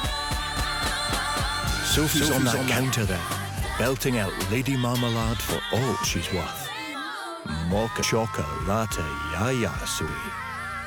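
A doubled audio track runs from 0.57 to 2.85 s. A second full-band copy trails the original by about 200 ms, roughly 5 dB quieter, with no decay or room colouring. It enters and leaves abruptly. The likely cause is the same signal reaching the mix twice, once through a slower capture path or through an edit that left two misaligned copies stacked.

Compressed frames are skipped at 1.07, 6.93, 8.02 and 10.07 s. At each point whole blocks of encoded audio never play, so the sound lurches forward: about 300 ms at the first two, about 200 ms at 8.02 s, and about 150 ms at 10.07 s. Those jumps come in multiples of roughly 21 ms, which fits the decoder's frame length.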